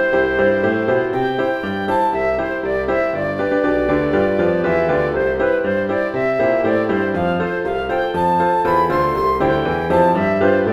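No technical faults can be heard anywhere in the audio.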